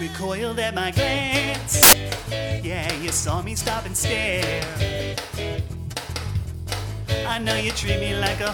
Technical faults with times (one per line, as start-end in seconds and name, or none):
1.83-1.93 samples built from the wrong bytes